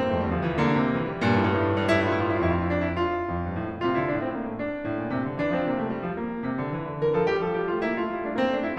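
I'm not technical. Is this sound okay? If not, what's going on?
Yes, this music sounds fine, with nothing wrong.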